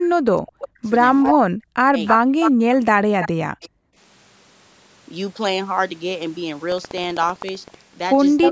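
From 0.0 to 0.81 s, and again from 1.32 to 3.87 s, the speech dips sharply and breaks up in pieces. At its deepest it falls by about 40 dB. This is likely speech suppressed in double talk. With both sides talking, the echo canceller could not separate the local talker from loudspeaker echo, so it turned both down.

Echo leak appears at 1.23 to 1.34 s, 2.05 to 2.47 s, 3.23 to 3.28 s, 3.62 to 3.67 s and 8.41 to 8.49 s. Each is a delayed copy of the speech, trailing it by 310 ms. Most sit about 5 dB below the speech. The one at 3.23 s is about 10 dB down, and the one at 3.62 s is about 30 dB down. The likely cause is an echo canceller on a loudspeaker side that let part of its microphone pickup through.

From 6.66 to 8.03 s there is buffer tearing. It sounds like a robotic rattle at 15.6 Hz, heard only while sound is present. That rate fits a 1024-sample buffer. The writing program and the playback hardware have slipped, so a small slice of each buffer holds audio from about 200 ms earlier, with hard joins on both sides.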